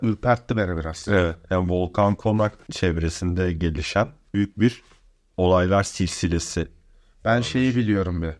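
Nothing in the speech stood out as a technical problem on listening.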